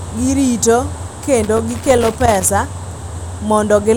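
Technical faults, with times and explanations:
1.44 to 2.49 s, loose connector crackle: for roughly a second the speech is broken up by an irregular, scratchy crackle. A worn or dirty contact in the signal path was shifting, so the connection kept making and breaking many times within that stretch. Each break chops the audio briefly, and any DC present on the line turns those interruptions into clicks.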